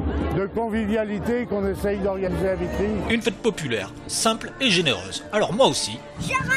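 At 2.26 to 2.28 s, the audio jumps forward. Compressed frames were skipped. Whole frames never reached the output, either lost from the file or rejected by the decoder as damaged. About a tenth of a second of sound is simply gone. A second skip follows at 3.24 to 3.27 s, dropping roughly 50 ms.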